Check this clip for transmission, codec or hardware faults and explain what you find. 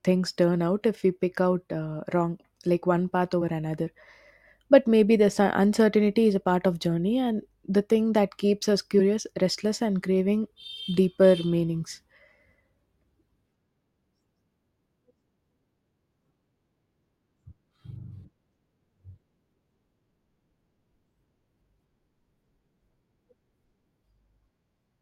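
Compressed frames skipped, at 3.41 s after "wrong like one path", 8.99 s after "thing that keeps us", and 10.63 s after "restless and craving". The decoder never played whole 20 ms frames of the speech, either because they were missing or because they were rejected as damaged. The audio jumps ahead by about one frame at 3.41 s, roughly four at 8.99 s, and about two at 10.63 s.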